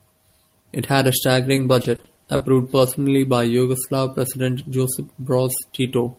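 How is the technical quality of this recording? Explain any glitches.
The recording has one clear glitch: repeated packet loss, heard as robotic sound, from 1.55 to 3.12 s. Packets kept arriving late or not at all, and each hole was patched by stretching the preceding audio. Seven short gaps, the longest 40 ms, follow one another closely, so the speech turns choppy, with fragments missing.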